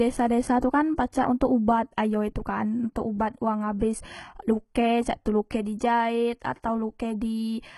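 Throughout, the treble is gritty and lispy, with nothing above 11.7 kHz. This is likely HE-AAC compression at a very low bitrate, around 16 kbps, whose copied-up upper bands replace the real ones. At 3.79 s, pre-echo puts a brief 18 ms smear of hiss just before an attack, because block-spread quantisation noise precedes the transient instead of trailing it as a reverb tail would.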